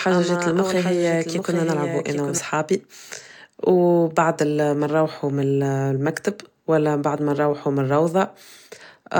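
A second, slower capture path or an out-of-step edit likely mixed the speech in twice: until 2.38 s, a doubled audio track trails about 0.7 s behind, roughly 5 dB quieter, with no room colour, then stops abruptly.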